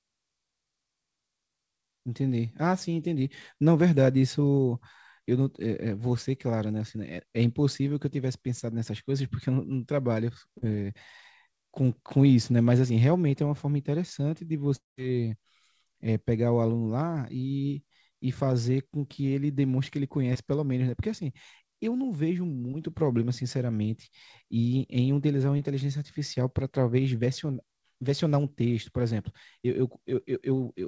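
At 10.58 to 10.64 s and again at 20.33 to 20.37 s, brief smears interrupt the speech. This is short concealed packet loss: about 40 ms and then 20 ms of audio arrived too late, and the receiver bridged each gap by extending the preceding sound. At 14.76 to 14.99 s the speech turns into a fading continuation and then about 160 ms of silence before resuming, likely a long network dropout in which roughly 220 ms never arrived. Throughout, the band stops at 8 kHz, which fits a wideband call codec.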